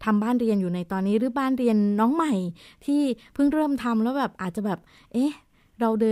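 No technical faults are audible anywhere in the speech; nothing to flag.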